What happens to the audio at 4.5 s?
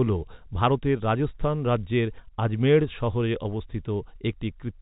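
Nothing goes wrong at 4.5 s: the speech carries on intact through that moment, with the same narrow telephone band it has throughout.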